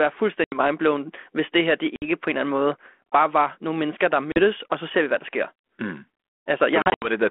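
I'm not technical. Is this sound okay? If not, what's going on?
No. This is packet loss on an ADPCM call. Pieces of the speech vanish into sudden silence at 0.44, 1.96 and 4.32 s, and in several short gaps between 6.82 and 7.08 s. Each time, the phone's decoder loses its place, so the sound returns slightly distorted, then settles.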